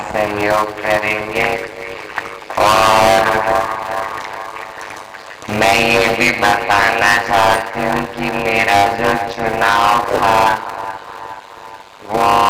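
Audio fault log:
Throughout, block size mismatch (padded): every block written is shorter than the block read, so zeros fill each remainder. These short gaps make a 100 Hz buzz, and the audio runs at 0.533 speed with timbre unchanged, which fits 256-sample writes.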